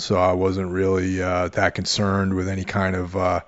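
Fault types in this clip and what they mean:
No technical faults can be heard in this speech recording. There is nothing here to list.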